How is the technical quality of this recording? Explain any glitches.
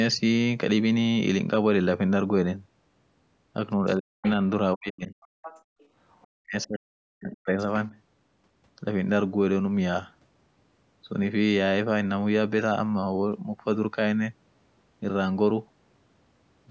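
The recording has a rough patch between about 3.8 and 7.6 s, where both ends of the call seem to have been talking at once. The echo canceller struggled there, and three kinds of glitch are bunched together. The audio also tops out around 8 kHz, which fits a call microphone path running at 16 kHz.

Speech suppressed in double talk shows up at 3.82–4.24 s, 4.74–5.17 s and 6.38–7.58 s. The talker's speech dips hard, in places by something like 40 dB, so it thins out or breaks into pieces. The longest stretch loses about a second in total. The likely cause is the canceller hearing the far end on the loudspeaker at the same moment, failing to tell the two apart, and turning everything down.

The other side's voice leaking through comes in short scraps at 4.24–4.30 s, 5.21–5.63 s, 5.79–5.88 s and 6.10–6.27 s. The strongest bits, around 5.2–5.6 s, sit maybe 15 dB under the talker. The later ones are much fainter, well down in the background. 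This is likely loudspeaker sound that the canceller didn't fully scrub from the microphone, so a second voice creeps in behind the main one.

Background gated by the echo canceller happens once, from 5.63 to 5.79 s. The room tone suddenly drops by about 32 dB for roughly 150 ms, then snaps back. In this clip the canceller clamped down on the microphone while the loudspeaker was active and let go just as quickly. The result is a brief hole in the ambience, right between two of the leak scraps.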